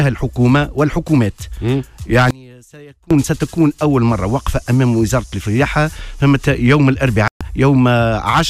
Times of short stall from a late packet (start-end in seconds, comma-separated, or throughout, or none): none